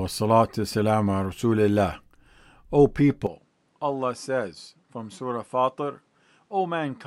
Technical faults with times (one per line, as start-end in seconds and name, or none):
3.27-7.06 input switched to a poorer device